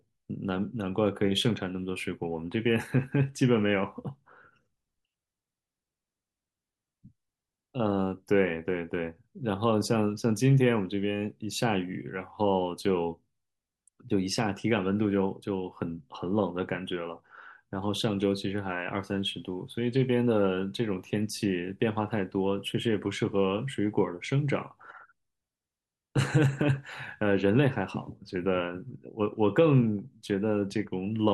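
No technical faults can be heard anywhere in the recording.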